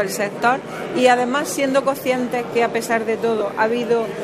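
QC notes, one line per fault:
0.49–4.23 s, mains buzz: a steady, raspy buzz begins and lasts to the end, roughly 30 dB below the sound. Switching spikes twice per 50 Hz cycle create dense harmonics, seen on a spectrogram as evenly spaced horizontal lines every 50 Hz reaching into the kilohertz range.
3.39–3.41 s, lost LE Audio frames: about 15 ms turns into a brief noisy smear, which fits two lost frames concealed by the LC3 decoder reusing the last spectrum with random signs. A spectrogram shows tonal lines blurring into broadband noise; the waveform loses its regular shape there.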